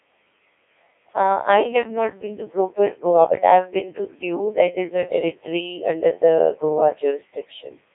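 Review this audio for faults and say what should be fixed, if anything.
Throughout the clip, the speech has passed through a Codec 2 vocoder. It keeps only pitch, voicing, energy and a coarse spectral envelope, then resynthesises the speech from sine waves; the heavy damage fits its 1.6 kbit/s mode. The result sounds robotic and buzzy, limited to 300 Hz to 3.6 kHz. To prevent it, carry the audio over a waveform codec at an adequate bitrate instead of a low-rate vocoder link.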